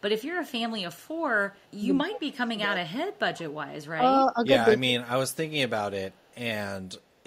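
From 1.54 to 1.76 s there is an echo leak. A faint delayed copy of the speech trails it by 193 ms. It sits far below the main voice, roughly 40 dB down. The likely cause is a far-end loudspeaker whose echo canceller let part of the returned signal through. The same faint repeat, with the same 193 ms delay, comes back from 5.3 to 5.51 s and from 6.13 to 6.33 s.

From 2.1 to 3.05 s the speech is suppressed in double talk. The talker's level dips hard, by roughly 25 dB at its deepest, for most of that stretch. This is likely an echo canceller that heard both sides at once and turned everything down. Shorter dips follow. At 4.33 to 4.37 s the drop is slight, a few dB. At 4.85 to 4.93 s it is deeper, around 15 dB.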